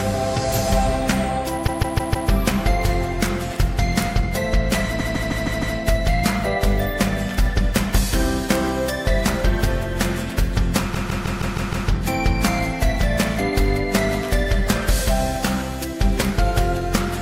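A short block of compressed frames was sent again and again at three points, so the decoder replays the same 157 ms slice, a length that fits a run of about six frames. These repeated frames sound like a stutter: from 1.66 to 2.29 s the slice plays four extra times, from 4.98 to 5.76 s five extra times, and from 10.93 to 11.87 s six extra times. Each stutter stretches the audio by 0.63, 0.78 and 0.94 s respectively.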